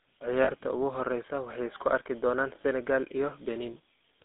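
Speech carried through the GSM full-rate codec: a buzzy, gravelly roughness throughout, bitrate consistent with 13 kbps, with a spectrogram showing energy confined to roughly 250 Hz to 3.6 kHz. Lost GSM frames hold the sound as a brief metallic ring, visible as smeared, repeated spectral frames: from 0.44 to 0.52 s, just before "ugu horeysa waxay isku", and a shorter 20 ms dropout at 2.62 s, just after "waxay isku arki doonan".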